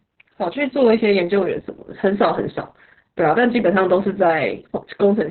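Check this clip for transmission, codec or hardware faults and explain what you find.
One codec fault runs through the whole clip: Opus voice compression. The speech is band-limited, with nothing above 4.2 kHz. The sound fits the SILK coder at a very low bitrate, around 6 kbps. Coarse excitation coding leaves it muffled, hoarse and slightly robotic.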